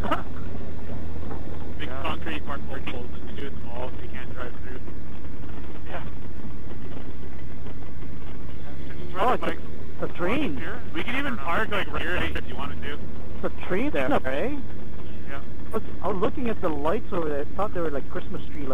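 Frames out of order occur at 0.53–0.84, 2.57–2.92, 5.19–5.43, 6.77–7.10, 8.17–8.49, 11.97–12.36, 13.89–14.26 and 15.74–16.12 s. Each time, two adjacent blocks of audio play swapped, giving a garbled flutter. No time goes missing.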